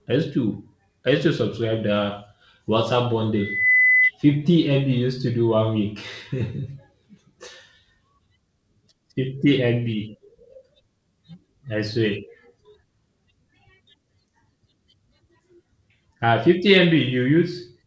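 From 3.35 to 4.11 s, loudspeaker feedback squeal: the microphone-speaker loop runs away at 2 kHz, swelling over about a third of a second rather than sounding steady like a hum.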